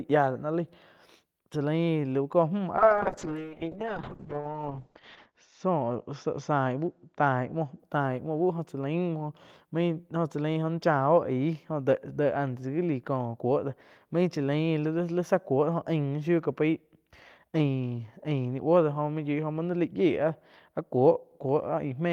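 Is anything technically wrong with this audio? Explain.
Yes, there is a call bitrate drop from 2.78 to 7.85 s. The encoder, starved of bits in a way that fits a fall from about 32 to 7 kbps, codes coarsely and cuts the spectrum above 8 kHz. The speech turns muffled and rough, worst for about 2.5 s. A spectrogram shows the top band vanishing.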